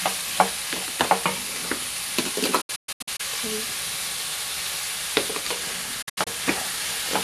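A digital broadcast dropout mutes the sound from 2.61 to 3.20 s in several short holes, the longest 120 ms, with quick 8 ms fades. It recurs from 6.02 to 6.27 s, longest hole 72 ms, consistent with corrupted frames being muted and their content lost.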